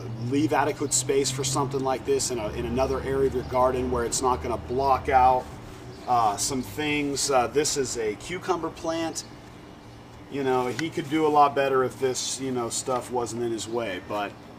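Nothing stood out on listening; no technical fault could be heard at any point in the audio.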